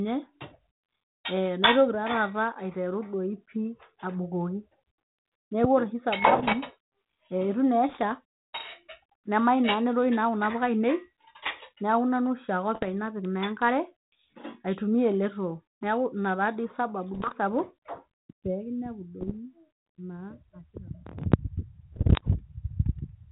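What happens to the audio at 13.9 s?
Nothing goes wrong at 13.9 s; the speech there carries only the band-limited character of its 32 kbit/s G.726 ADPCM coding and no fault.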